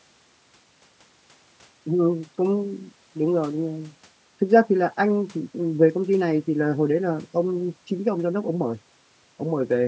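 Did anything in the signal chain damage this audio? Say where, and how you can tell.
No, nothing damaged this audio.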